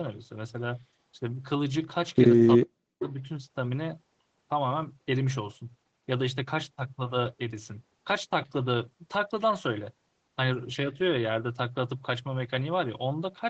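From 2.56 to 3.05 s the speech sinks by roughly 40 dB for about half a second and then recovers. This is most likely speech suppressed in double talk: the echo canceller, unable to separate the near talker from loudspeaker echo, turned everything down. Unlike a packet-loss dropout, there is no concealment warble. The level is pulled down and released, and the sound stays capped near 8 kHz by the Opus call path throughout.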